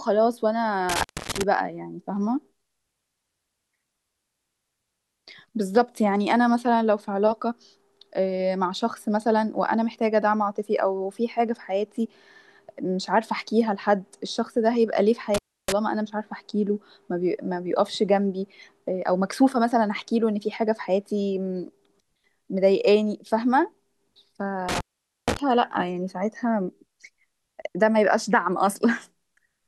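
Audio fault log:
0.89–1.43 s, 15.34–15.72 s and 24.69–25.39 s: intermittent contact. The speech drops out three times. A loose cable or plug briefly loses its connection, so the signal path opens. Each break is framed by crackle as the contacts scrape apart and touch again. While the line is open, faint hiss remains. The gaps last about 0.27 s, 0.30 s and 0.47 s, and the last is the longest.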